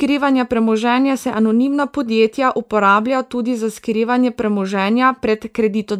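No technical faults can be heard anywhere in the speech.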